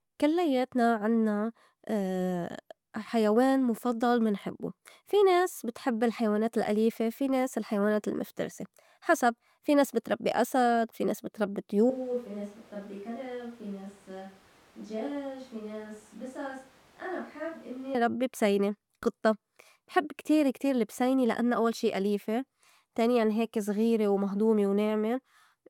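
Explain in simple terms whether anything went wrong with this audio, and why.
From 11.9 s, just after "أسد في ناس بتربّي", the speech abruptly becomes roomy, hollow, quieter and thinner, with more background noise, until 17.9 s, where "ربّي بسيني قطّة بحب" sounds close again. This is a switch to a distant microphone, likely because the close microphone dropped out.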